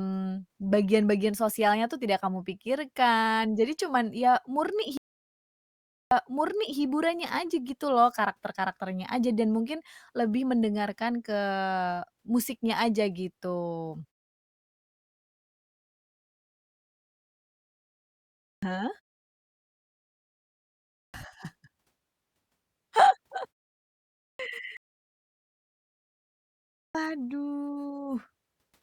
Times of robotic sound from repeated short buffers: none

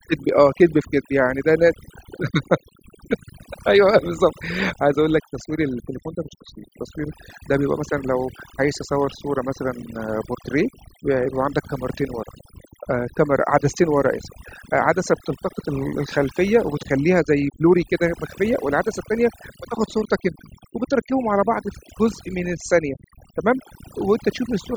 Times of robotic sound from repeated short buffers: none

